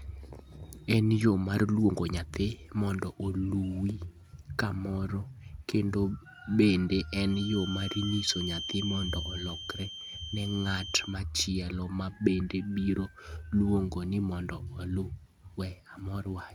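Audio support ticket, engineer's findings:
Feedback whistle, 7.24 to 11.20 s. Thin steady 3.1 kHz tone, roughly 10 dB under the speech, swelling and fading slowly in level. Likely speaker-to-mic loop held just below runaway. Level wobble and single high pitch separate it from fixed-level electrical tone or mains hum.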